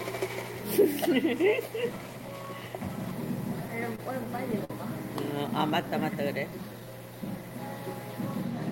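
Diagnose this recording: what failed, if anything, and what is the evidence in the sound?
Repeated stalls (stutter) at the network/jitter-buffer stage, 3.53 to 4.71 s: eight short hitches, the longest 50 ms, together about 122 ms. Packets arrived late, the buffer ran dry, and the receiver extended the preceding sound each time. Nothing is lost, but the passage drags.

Jitter buffer slow-down, 5.48 to 6.86 s: the sound runs at about 93% speed with pitch unchanged, stretching the span by 99 ms. The receiver repeated single pitch periods and pause fragments to rebuild its reserve, drawing sounds out.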